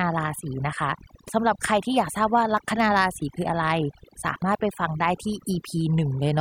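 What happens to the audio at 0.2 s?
At 0.2 s the overdone noise removal that runs through the whole clip is already audible. The suppressor cuts any band near its noise estimate almost to nothing, so the background falls to twinkling near-silence.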